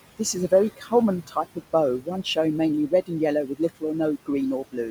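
Noise suppressor artifacts run through the whole recording. The suppressor pulls the room noise down by about 17 dB between phrases and lets it swell back under the speech. On a spectrogram the noise floor pumps in blocks.

Speech cut by the noise suppressor occurs at 0.77–0.92 s, 1.27–1.58 s and 3.47–3.83 s, dipping by about 11, 13 and 17 dB. The suppressor mistook soft speech for the background, which sits about 15 dB below the voice, so those parts sound swallowed. The waveform envelope sags there.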